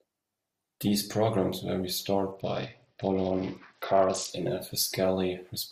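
From 2.31 to 4.30 s, after "programs were", a Bluetooth SBC bit pool drop starves the upper bands. Treble dulls and grit rises.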